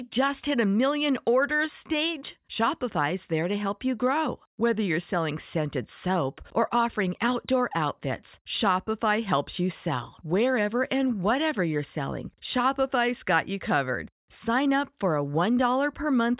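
No technical faults can be heard anywhere in the speech recording; the signal stays continuous and steady throughout.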